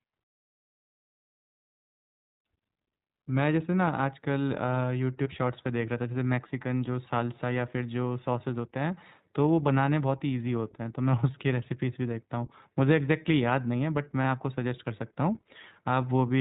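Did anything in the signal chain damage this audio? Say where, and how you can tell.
Yes. The codec stage did damage. This is iLBC codec coding throughout the speech. Nothing above 4 kHz survives, and there is a plainly audible rough, synthetic edge. Each short frame's excitation is coded alone, which fits iLBC's 15.2 kbps mode with 20 ms frames.

The network stage shows lost iLBC frames at 5.24 to 5.28 s and 14.22 to 14.24 s. Each gap fits a single 20 ms frame. The decoder filled it by repeating the last pitch cycle with added noise, heard as a brief buzzy held vowel. The voice recovers at once.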